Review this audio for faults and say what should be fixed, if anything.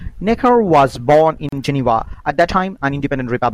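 Time-stretched section, from 1.26 s to the end: the speech suddenly runs about 1.58 times faster while its pitch stays the same, so the delivery turns rushed. The likely cause is software squeezing this part to fit a set length, keeping the pitch by cutting out short slices of the waveform and butting the rest together. To prevent it, edit or re-record the passage to the required length instead of compressing it with pitch-preserving stretch.

Gap at a join of encoded pieces, from 1.49 s to 1.52 s: a silence of about 37 ms cuts into the middle of continuous speech, its edges smeared by the codec, and the sound then resumes exactly where it stopped. This happens when separately encoded segments are spliced without removing the encoder's start-up delay and the padding on each segment's final frame, so both silences remain at the join. To prevent it, trim encoder delay and padding (or use gapless-aware tools) before concatenating segments.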